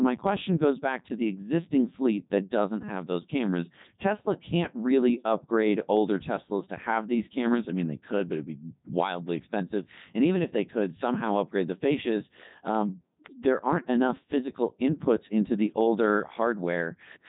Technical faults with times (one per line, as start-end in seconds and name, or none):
0.00-17.28 Codec 2 vocoder